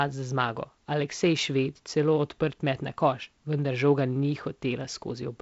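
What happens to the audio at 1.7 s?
Nothing goes wrong at 1.7 s; the speech passes through intact, carried by the G.722 wideband telephone coding with its content stopping short of about 7.7 kHz.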